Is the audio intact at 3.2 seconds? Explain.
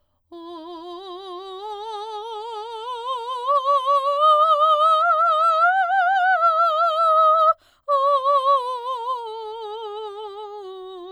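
Yes, the music plays through 3.2 seconds with no audible break, click, dropout or distortion at that point.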